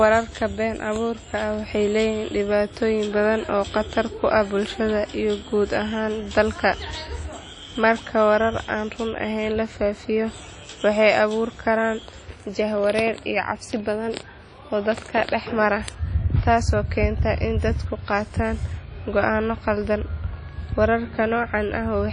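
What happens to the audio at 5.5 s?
At 5.5 s the speech carries WMA compression damage, present throughout the clip: long transform blocks smear quantisation noise into a ringing, washy haze, with hiss breathing alongside the sound. A spectrogram shows nothing above 10.1 kHz and gapped, blotchy patches where weak components vanished, likely from a low bitrate around 32 kbps.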